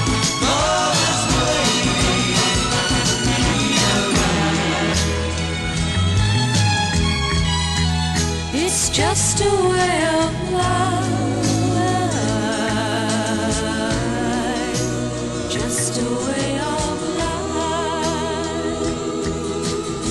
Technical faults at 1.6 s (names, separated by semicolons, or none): none